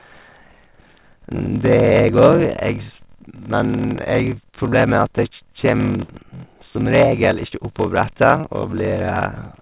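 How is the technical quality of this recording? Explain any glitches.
The quality suffers from two problems: a steady buzz with slowed-down playback running the whole way through, and four brief dropouts patched over from about 4.7 s onward. The band also stops at about 4 kHz, which fits a G.711 call path.

Block size mismatch (padded), throughout: one stage hands over shorter blocks than the next reads, fitting 1024-sample writes, and zeros fill the remainder. That tiny gap in every block gives a 41.7 Hz buzz, and everything plays at 0.889 speed, slower than it should.

Short concealed packet loss at 4.70, 6.04, 7.47 and 8.41 s: bits of audio between 20 and 40 ms long never arrived in time. The receiver extended the preceding sound to cover each hole before blending back in, so you hear a quick smear or wobble at each point.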